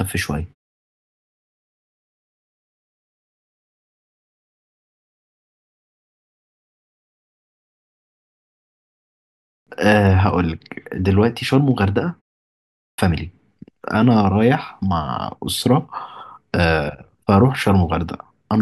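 At 9.25 s and again at 12.54 s, a clipped start after a pause swallows about 0.42 s and 0.44 s of speech as the output device wakes. Speech begins abruptly, missing its opening sounds.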